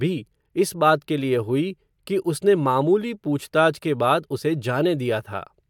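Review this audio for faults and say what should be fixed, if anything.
Nothing needs fixing: the speech signal shows no technical faults at any point.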